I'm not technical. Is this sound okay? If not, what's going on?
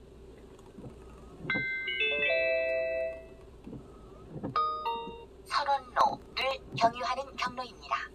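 No. Processor overload crackle runs from about 6.01 to 6.73 s. The computer fell behind on tiny chunks of audio, each a few milliseconds long. About ten times it replayed an old chunk, and those abrupt repeats sound like crackling.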